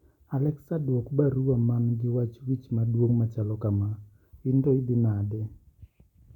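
No technical faults can be heard anywhere in the recording. Nothing in the speech signals a problem with how it was captured or delivered.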